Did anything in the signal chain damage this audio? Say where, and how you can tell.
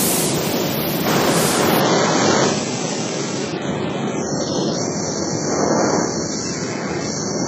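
Yes. At 1.80 s an adaptive stream at a lower bitrate takes over at the network and codec stage and stays until the end. The treble vanishes suddenly above 7.9 kHz with no gap, and the missing top points to a very low-bitrate HE-AAC rendition replacing the higher-quality stream.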